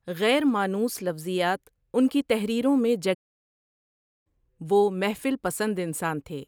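A speech clip with a playback stall: after "ان کی تحریروں میں" the output drops to silence from 3.14 s to 4.27 s, about 1.1 s, then resumes at "وہ محفل". The gap likely comes from the player running out of buffered data or its thread blocking.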